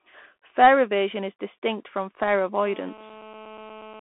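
Speech runs through a Bluetooth CVSD headset codec for the whole clip. Its one-bit delta coding, consistent with a 64 kbps stream, leaves a 200 Hz to 3.4 kHz line band, nothing above 3.8 kHz, scratchy sibilants and granular hiss. From 2.66 s to 4.0 s, just after "is distinct from fare", GSM phone buzz appears. A nearby handset on a call bursts about 217 times a second, and the rectified pulses add a steady, raspy buzz about 20 dB below the speech.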